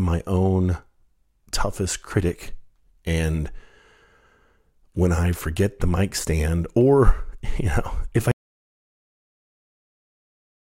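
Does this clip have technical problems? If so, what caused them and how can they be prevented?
Yes. There is an audio dropout to silence. At 8.31 s, right after "if I", the speech cuts off mid-flow. Silence follows, with no room tone, until the clip ends. The input signal was likely lost, through a disconnected device, failed link or mute, while the recorder kept writing silence. Secure all connections and monitor input levels live so a lost signal is noticed immediately.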